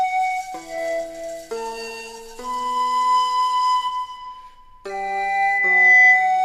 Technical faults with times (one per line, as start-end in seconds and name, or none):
4.89-6.44 loudspeaker feedback squeal